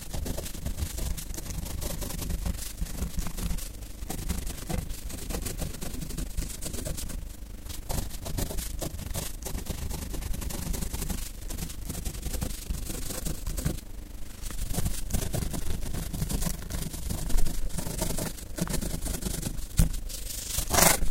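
From start to finish, the audio carries overlap-add ripple. Somewhere in processing, the signal was split into windowed frames and rejoined with an overlap whose windows do not add up to a steady gain, so the level swells and dips once per frame, by about 11 dB and at roughly 30 times a second. That regular pumping rides on every sound in the clip as a fast, gritty flutter, a rough mechanical tremolo.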